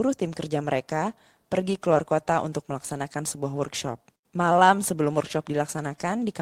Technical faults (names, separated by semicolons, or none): none